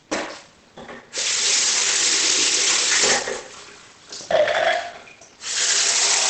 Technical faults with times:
0.00-6.30 Opus compression

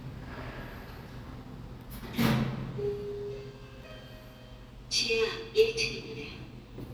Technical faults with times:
none

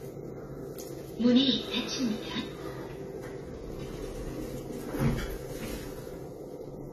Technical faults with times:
0.00-6.92 AAC compression

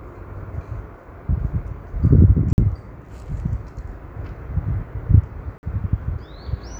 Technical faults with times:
2.53-2.58 gap between chunks
5.58-5.63 gap between chunks

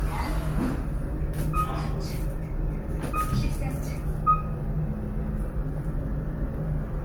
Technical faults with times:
0.00-7.04 generation loss

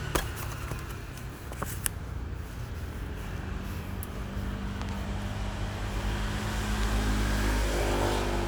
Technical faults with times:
4.82-4.91 loud pop
6.83-6.85 loud pop

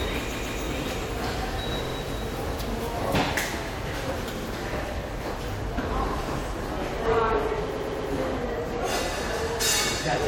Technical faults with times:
0.31-0.59 repeated frames
1.85-1.94 repeated frames
4.38-4.45 repeated frames
7.74-8.09 repeated frames

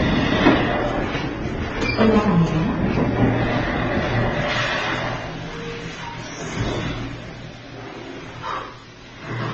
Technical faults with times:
0.00-9.54 transcoding between lossy codecs
4.49-9.54 pre-emphasis left on

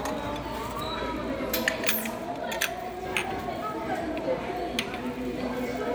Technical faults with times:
none

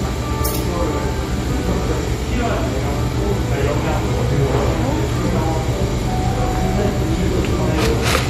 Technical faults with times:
0.00-8.29 MP3 compression

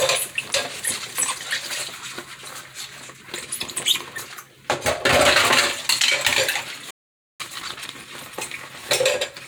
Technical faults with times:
6.90-7.40 playback stall
7.40-7.88 time-compressed catch-up

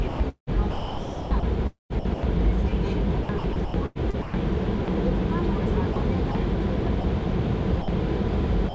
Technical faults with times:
0.08-2.70 sound chopped by the voice detector
3.23-4.34 sound chopped by the voice detector
4.85-4.88 sound dropped by the voice detector
5.93-6.35 sound chopped by the voice detector
7.01-7.04 sound dropped by the voice detector
7.82-7.88 sound dropped by the voice detector
8.69-8.75 sound dropped by the voice detector

